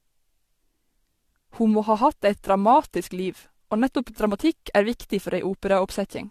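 Throughout, the speech sounds swirly, hollow and smeared, with nothing above 14.3 kHz. Likely generation loss: about four lossy re-encodes, each stacking new quantisation noise.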